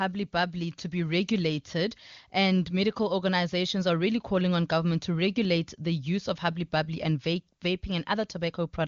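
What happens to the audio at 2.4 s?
Nothing goes wrong at 2.4 s: the speech carries on intact through that moment, with only the AMR wideband (HD Voice) codec's usual limit of no content above about 7.3 kHz.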